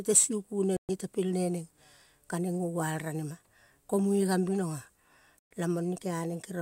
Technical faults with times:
0.77-0.90 Bluetooth stall
5.39-5.51 Bluetooth stall

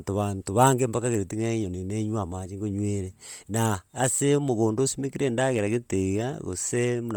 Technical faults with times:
0.00-7.16 Bluetooth LC3 compression

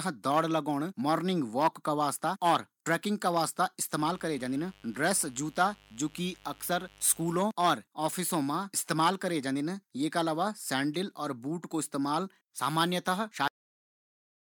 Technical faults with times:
3.95-7.45 mains buzz
13.48-14.44 cut-off end

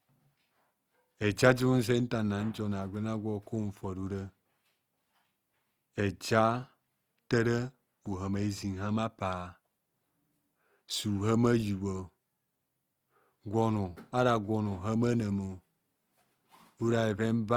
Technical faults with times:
0.00-17.56 Opus compression

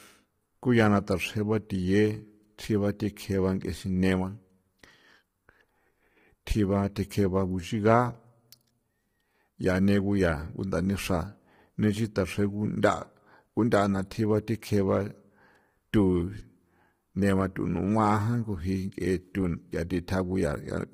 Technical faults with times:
0.00-20.93 low-delay AAC compression

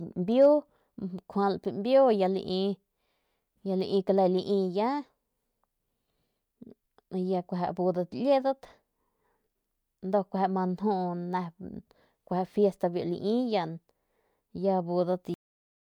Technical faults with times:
15.34-15.91 cut-off end

